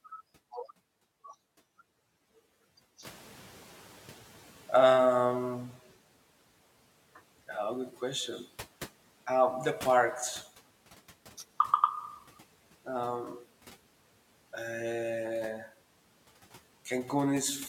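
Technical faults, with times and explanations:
3.04–5.82 s, noise suppressor catching up: the room noise jumps about 13 dB around 3 s, and the suppressor's estimate lags, so it leaks through, then sinks about 9 dB over 2.78 s.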